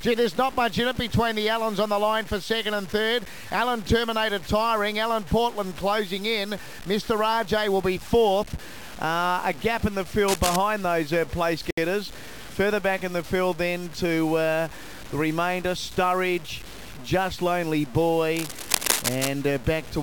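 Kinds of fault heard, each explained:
Low bit depth without dither: grainy distortion follows the sound, noise roughly 20 dB down, likely 6-bit truncation; waveform shows visible steps, spectrogram signal-tracking hash.
Cable scratch noise: dense, uneven rustling bursts nearly as loud as the sound at 10.28–10.56 s and 18.35–19.29 s, likely a worn contact; broadband ragged smears.
Gap at a join of encoded pieces: a 68 ms gap at 11.71 s from separately encoded pieces joined untrimmed; flat waveform, empty vertical band with smeared edges.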